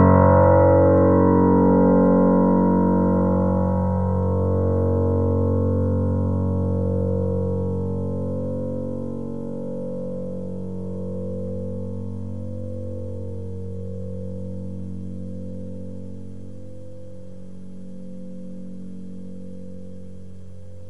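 There are no technical faults to describe in this recording of sounds.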